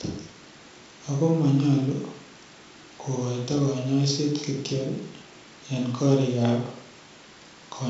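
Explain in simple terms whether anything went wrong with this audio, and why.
Nothing went wrong; it sounds like an ordinary wideband phone call.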